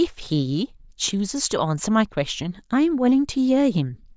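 No faults are audible anywhere in the recording.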